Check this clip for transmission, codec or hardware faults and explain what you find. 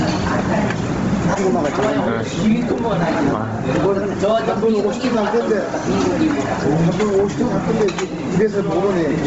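Two faults run through the whole clip: gain pumping and heavy Bluetooth LC3 compression.

Gain pumping lasts from start to finish. The gain swings by about 15 dB. The likely cause is gain set far too high, with a fast limiter pulling it down on every peak. Loud and quiet parts sit close together, and everything sounds squashed.

Bluetooth LC3 compression is also present throughout, and the damage is heavy. Nothing is heard above 7.8 kHz. The upper band has a grainy, noisy texture instead of real detail. This likely comes from the LE Audio codec at a low rate, which fits about 24 kbps with 7.5 ms frames. The encoder discards much of the high spectrum and fills it with noise, so the sounds come across as breathy and coarse.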